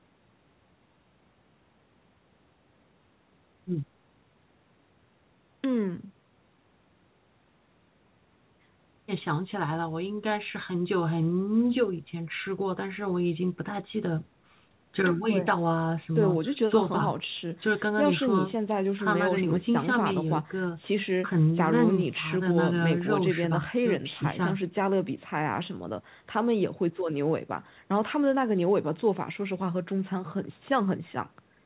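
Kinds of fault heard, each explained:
Nothing in this speech recording registers as a fault.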